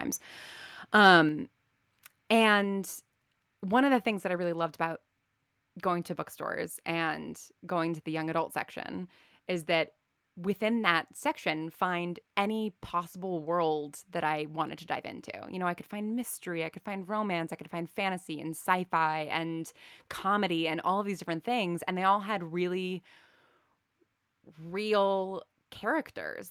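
Speech recording with a single level fault: at about 1.29 s the whole signal, voice and background together, drops by about 4 dB in one abrupt step and stays at the lower level. This is a microphone volume stepped down event, likely caused by the call software judging the input too hot and cutting the device's capture gain in one move. Because the drop happens at the input stage, the noise floor falls along with the voice.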